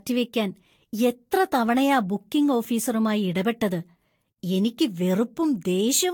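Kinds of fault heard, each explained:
Generation loss: The speech sounds swirly, smeared and hollow throughout, with blurred consonant attacks and nothing above 19.2 kHz, more degraded than a single lossy encode at this quality would leave it. The likely cause is repeated decoding and re-encoding, around five passes through a Vorbis-type codec at roughly 70 kbit/s. Each pass quantises again on a shifted frame grid, so artefacts and spectral holes accumulate rather than staying fixed.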